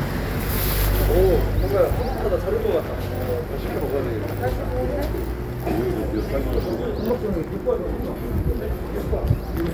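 No technical faults can be heard in this recording of sounds, and the signal stays continuous and intact the whole way.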